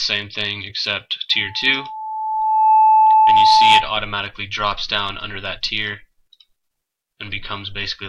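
The audio carries a loudspeaker feedback squeal from 1.32 s to 3.91 s. A steady 870 Hz tone swells over roughly a second and a half to around 10 dB above the program, as the microphone re-amplifies its own loudspeaker at that frequency.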